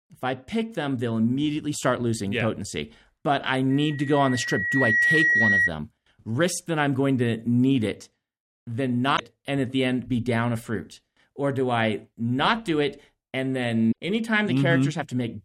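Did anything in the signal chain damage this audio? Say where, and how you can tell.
Yes. Loudspeaker feedback squeal from 3.7 to 5.71 s: a single 1.9 kHz tone swells over roughly a second and a half to sit about 5 dB above the speech. A microphone was hearing its own loudspeaker, and at that frequency the acoustic loop's gain passed one.

Damaged data in a compressed stream, a codec or storage fault, at 9.13 to 9.20 s, between "to need it then" and "and at the end", and at 13.89 to 13.93 s, after "not do it and". Each is a brief glitch where corrupted frames broke the decoder's sync until it found the next valid frame.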